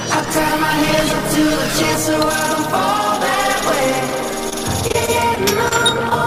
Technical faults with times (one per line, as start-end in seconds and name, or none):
4.49-5.73 repeated packet loss (robotic sound)
6.09-6.13 short stall from a late packet